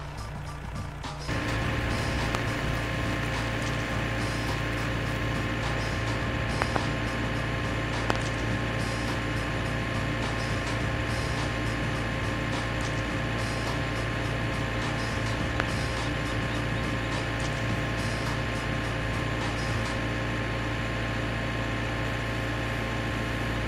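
Loud pops occur at 2.35–2.37 s, 6.62–6.78 s (a double), 8.10–8.18 s (a double) and 15.60–15.62 s, peaking about 25 dB above the sound. They likely come from electrical voltage spikes. Each appears as a tall waveform spike and a full-height vertical spectrogram stripe.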